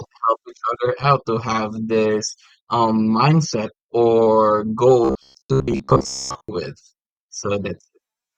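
From 5.05 to 6.49 s the speech collapses into robotic sound from repeated short buffers: a rigid, metallic buzz near 66.7 Hz that still loosely tracks the speech. The likely cause is audio arriving too slowly, so the player loops roughly 15 ms fragments and skips most of the real material. On a spectrogram this shows as evenly spaced horizontal harmonics at multiples of 66.7 Hz; the waveform shows a short cycle repeating almost identically.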